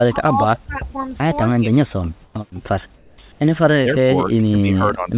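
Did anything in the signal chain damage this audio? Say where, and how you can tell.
Yes. The speech itself dips hard from 0.02 to 0.95 s, for around 0.7 s of that stretch, at worst by around 20 dB, and again from 3.83 s to the end, by around 25 dB. That points to speech suppressed in double talk, most likely in the call processing. An echo canceller that cannot separate its own talker from the loudspeaker echo turns both down. A level-control fault would ride the gain evenly instead.

Three gaps between phrases lose their natural background: 2.24 to 2.34 s (100 ms), 2.96 to 3.18 s (220 ms) and 3.32 to 3.40 s (80 ms). In each, the room tone, about 31 to 33 dB below the loud parts, turns flat and featureless. The first gap also drops about 3 dB. This is likely comfort noise in place of the background, generated at the receiver during transmission pauses. A noise gate would leave silence rather than steady synthetic hiss. 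The band stops at 4 kHz, which fits a G.711 call path.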